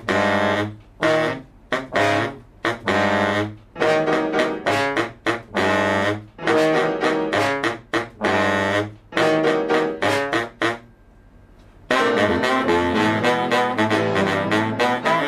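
No technical faults are audible.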